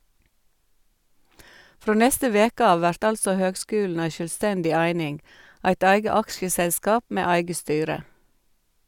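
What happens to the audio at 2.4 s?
Nothing goes wrong at 2.4 s; the speech continues intact through that moment with no dropout, click, distortion or other fault.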